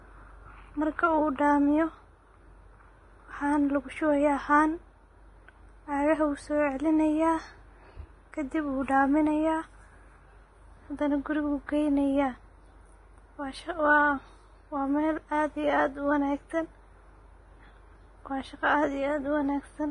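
Vorbis compression, throughout: the speech stops at 10.6 kHz and its treble turns hissy and grainy, likely heavy Vorbis coding at a bitrate near 27 kbps.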